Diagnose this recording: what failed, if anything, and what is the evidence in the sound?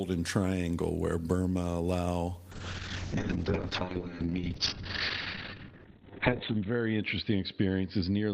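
A call bitrate drop at 2.52 s lasts to the end: the network's bandwidth estimate fell, forcing the codec from 32 to 7 kbps, muffling speech above 4 kHz.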